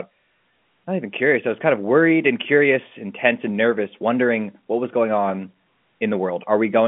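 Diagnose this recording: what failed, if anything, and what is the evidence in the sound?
Nothing failed. The speech sits within a telephone line band of about 150 Hz to 3.4 kHz with nothing above about 3.7 kHz, as expected of G.711 A-law telephone coding at 64 kbps, and any coding damage is faint at most.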